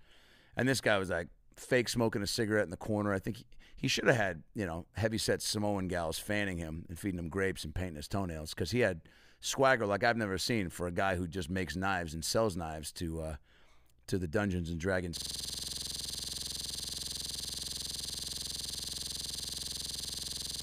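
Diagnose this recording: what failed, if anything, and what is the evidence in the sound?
Driver or buffer stage: a system hang loop from 15.17 s right to the end. The speech collapses into one 46.44 ms slice repeating over a hundred times, a rattling stutter at 21.5 Hz. That fits a 2048-sample ring buffer the hardware kept replaying after the system froze.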